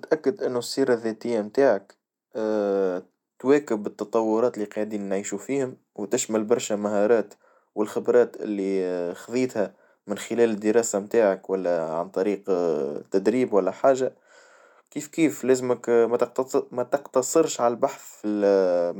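No dropouts, clicks, distortion or level jumps turn up anywhere in the speech; there is nothing to flag.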